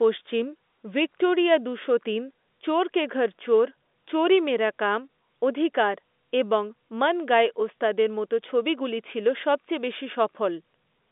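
No technical faults are audible.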